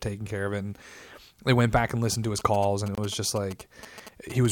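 From 2.39 to 4.46 s, GSM signalling bursts from a nearby phone are rectified by the audio circuit: galloping ticks and short 217 Hz buzzes, well below the speech, unlike a steady hum. At 2.95 to 2.98 s, a 26 ms silence, likely a Bluetooth stall, cuts the audio, which then resumes.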